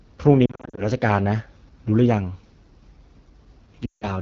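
Throughout, the speech passes through the AMR wideband (HD Voice) codec at 8.85 kbit/s, one of its two lowest rates. Too few bits are spent on the pulse excitation, so the voice sounds plainly rough and raspy, with a noise-filled top band.

Between 0.46 and 0.83 s, radio errors corrupted AMR speech frames, and the decoder patched the gaps by reusing earlier pitch and vocal tract settings with falling gain. About 200 ms of lost audio is scattered over roughly 320 ms, in runs no longer than 40 ms, so the speech warbles and dips repeatedly. From 3.85 to 4.05 s, a denser burst of lost AMR speech frames, about 160 ms in all, drops the sound to near silence within two frames.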